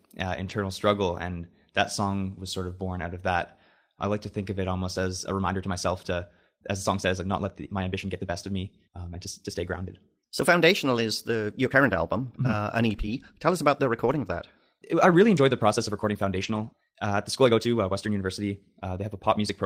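A lost packet rebuilt from error correction occurs at 0.49 to 0.51 s and again at 16.39 to 16.65 s in this speech clip. There is no dropout. Instead, a low-bitrate backup copy carried in the following packet fills the hole, so those stretches sound rougher and noisier. The second patch lasts 140 ms, which points to seven separate lost packets. A time-stretched section runs from 5.12 s to the end. The speech suddenly moves about 1.38 times faster at unchanged pitch and sounds rushed, likely from software dropping short slices of audio to shorten it while keeping the pitch.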